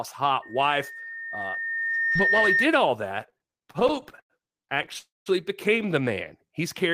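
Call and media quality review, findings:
Loudspeaker feedback squeal, 0.42–2.74 s: mic-to-speaker loop gain above unity at 1.8 kHz. A pure tone swells over roughly two seconds to about 5 dB above the speech.

Repeated stalls (stutter), 3.27–4.97 s: jitter buffer repeatedly underrunning, gaps up to 101 ms. About 413 ms concealed, nearly a quarter of the span, so the speech drags and stutters.

Call audio freeze, 4.99–5.28 s: likely a network hold-up emptying the jitter buffer. Roughly 272 ms of fill, about 190 ms of it silent, then the speech resumes where it stopped.

Jitter buffer slow-down, 6.14–6.60 s: buffer rebuilding reserve by repeating pitch periods, adding 41 ms. Speech runs at 93% speed with unchanged pitch and slightly drawn-out sounds.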